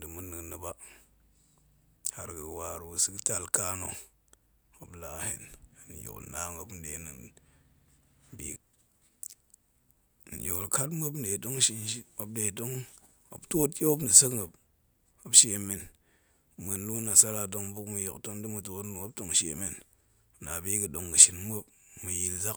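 Listening to this speech recording, nothing technical stood out as a problem.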